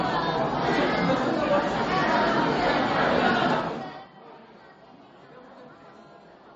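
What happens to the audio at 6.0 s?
At 6.0 s the audio carries MP3 compression damage, as it does throughout the clip: nothing sounds above about 8.2 kHz, and weak frequency lines flicker on and off, giving a watery, swirly texture, likely from a low bitrate around 32 kbps. That swirl is what separates it from a simple low-pass filter.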